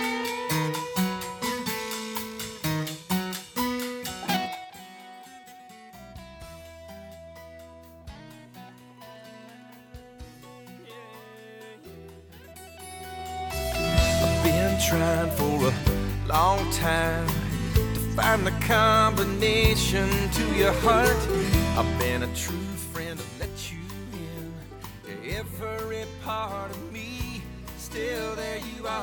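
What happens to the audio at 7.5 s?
Nothing goes wrong at 7.5 s: the audio runs on intact there, with no dropout, glitch or distortion.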